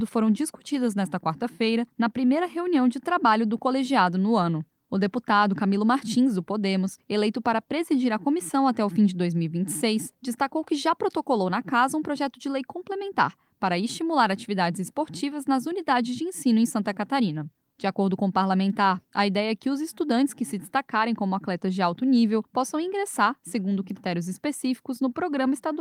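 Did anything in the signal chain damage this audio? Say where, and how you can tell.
No, nothing in the chain from capture through playback leaves an audible mark on this audio, so there is no damaged stage to point to.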